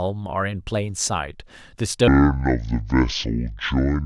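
From 2.08 s to the end, the speech falls into a section at the wrong speed, most likely because that stretch was played back against a mismatched clock, running at about 0.57 times its recorded rate. Because speed and pitch move together here, the voice drops abruptly by around ten semitones and stretches out, turning deep, slow and drawn-out at the switch point and staying that way through the rest of the recording.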